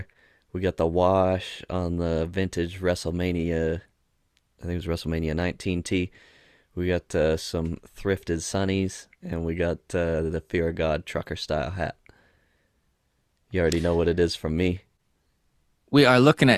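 No technical faults occur at any point in the recording, so there is nothing to describe in time order.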